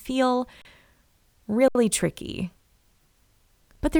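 At 0.62 s the speech freezes for about 33 ms, and again at 1.68 s for about 70 ms. Both are an underrun with held sample: the output buffer ran dry and the converter kept outputting its last value, so the waveform sits flat. Unlike a dropout to silence, each gap starts with little or no click. Little or no audio seems lost, so playback resumes where it stopped and each gap ends softly.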